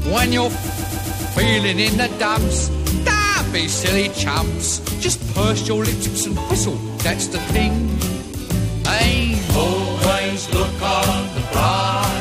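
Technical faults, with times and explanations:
0.63–1.33 s, repeated frames: the same 139.3 ms slice stutters five extra times, because a block of compressed frames, likely about six, was decoded again, adding 0.70 s.
6.04–6.18 s, repeated frames: one brief 139.3 ms skip-back, as the same block of compressed frames plays a second time, lengthening the audio by 139.3 ms.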